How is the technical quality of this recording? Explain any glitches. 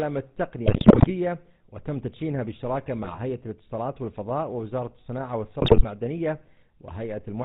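The technical quality is poor. GSM coding damages the whole recording, and three bursts of corruption break it up.

The GSM full-rate codec runs throughout. It models the vocal tract and drives it with coarse pulse excitation, which fits the 13 kbps GSM full-rate codec. Nothing above 4 kHz survives. The voice sounds buzzy, gravelly and band-limited from start to finish.

GSM bit errors strike at 0.66 to 1.11 s, 3.02 to 3.21 s and 5.62 to 5.85 s. Corrupted filter, pitch and gain values reach the decoder. Frames distort or jump in level, so the speech breaks into squawks, pops and gargling. The first burst is the worst.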